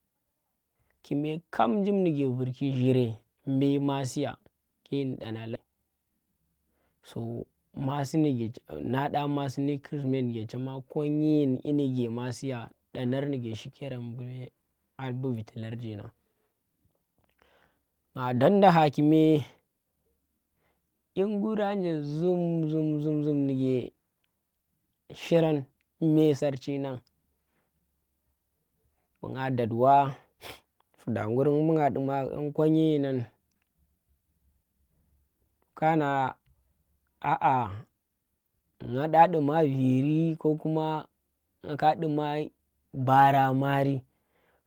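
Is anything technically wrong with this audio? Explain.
Yes, there are two glitches in this speech. At 5.55 s, right after "masiya ke ndi ɗana", there's a skip ahead: about a third of a second of audio got dropped while later audio was already queued, so playback jumps straight across with no filler and the join sounds abrupt.

Right after that, from 5.64 to 6.43 s, you get a jitter buffer speed-up. The buffer was holding more than its target, so the receiver kept snipping out tiny pitch-period-sized slices, around a tenth of a second in total. Speech runs at about 113% speed with unchanged pitch, so it sounds rushed.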